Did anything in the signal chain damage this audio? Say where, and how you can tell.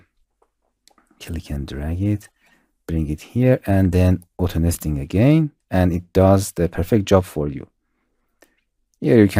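Yes, lost LE Audio frames on the Bluetooth link at 4.74 s: a brief noisy smear where the LC3 decoder concealed what sounds like one 10 ms gap.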